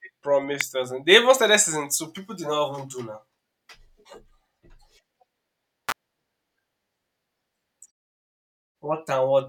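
A speech recording carries two electrical switching spikes. The first is a single sharp snap at 0.61 s. The second is a brief cluster of clicks from 5.89 to 5.92 s, lasting about 30 ms. Both sit on top of the sound rather than replacing it. The likely cause is a nearby switch, motor or static discharge arcing, with the audio line picking up the burst. The muted pauses fall silent between phrases as designed.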